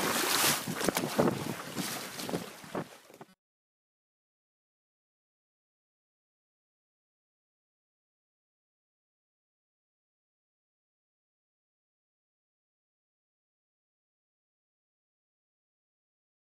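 Between 3.29 and 4.31 s, audio data most likely stopped arriving often enough, so playback kept repeating a short buffer of about 5.3 ms. The result is robotic sound from repeated short buffers: a rigid, metallic 188 Hz buzz, with much of the real audio skipped.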